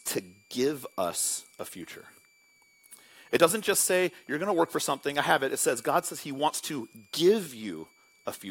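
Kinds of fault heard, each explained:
Switching supply whistle: a thin, high whistle sits under the speech for the whole clip, wandering between 2.2 and 2.4 kHz at about 35 dB below it, from a switching power supply cycling at an audible rate as its load shifts.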